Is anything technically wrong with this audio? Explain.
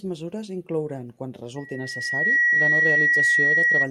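Yes. From 1.56 s, right after "mesures inclouran quan", to 3.90 s, a loudspeaker feedback squeal takes over. The microphone re-amplifies its own loudspeaker, and at 1.9 kHz the loop gain exceeds one, so that tone grows in under a second to roughly 10 dB above the speech. A spectrogram shows one bright horizontal line at 1.9 kHz, and the waveform envelope swells steadily.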